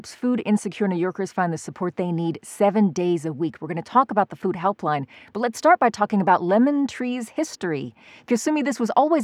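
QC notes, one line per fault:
No technical faults are present in the speech signal at any point.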